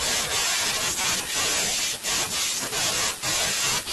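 Right around 0.99 s, running to about 1.05 s, there's a corrupt frame decoded in this speech. Some bits inside the compressed data got flipped, and the decoder went ahead and played it rather than concealing it, so misread gains and codes dumped energy into the wrong frequencies. It lasts about 60 ms, roughly a couple of frames' worth, and comes through as a brief glitch of misplaced sound peaking fairly hot, somewhere near -10 dBFS.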